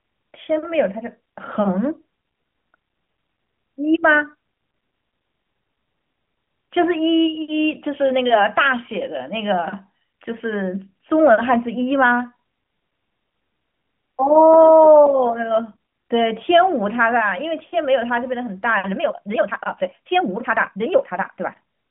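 From 18.83 s to the end at 21.91 s, the speech turns into a time-stretched section. The pace jumps abruptly to about 1.78 times normal, but the pitch stays where it was. Syllables sound crowded, with a rushed feel. The likely cause is software squeezing this stretch to fit a shorter length by dropping short slices. The narrowband phone-line band of the AMR-NB codec carries through the stretched part unchanged.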